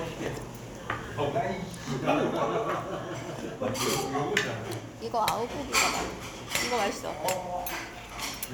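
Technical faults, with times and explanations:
Nothing here to flag; I listened all the way through and heard no technical faults anywhere in this recording.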